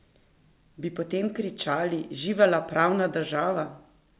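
Nothing here stands out as a fault; the speech comes over a call link using G.711 A-law at 64 kbps, so the top end simply stops around 4 kHz, which is just how that narrowband codec sounds.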